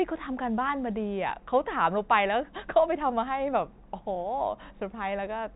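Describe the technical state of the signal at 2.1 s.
At 2.1 s the speech is intact, with no fault, and only the narrow band of the G.711 telephone coding can be heard, with nothing above 3.8 kHz.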